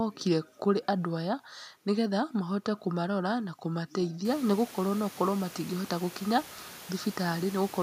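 No technical faults can be heard in the signal; the only change is the room's own background noise, which rises by about 23 dB around four and a half seconds in and then sits about 21 dB below the speech.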